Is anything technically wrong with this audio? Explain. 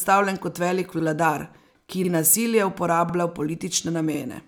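Yes. The speech has overlapping chunks at 0.99, 2.04, 3.09 and 4.14 s, one per second, the first right after "kot velik" and the third after "ki nasilje". Each new 1.0 s chunk begins 50 ms before the previous one ended, so that slice repeats, heard as a brief stutter or click at every join.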